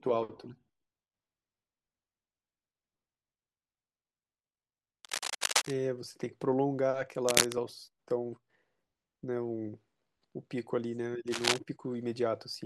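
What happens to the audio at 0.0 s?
Nothing goes wrong at 0.0 s: the audio is intact, with no dropout, click or distortion at that point.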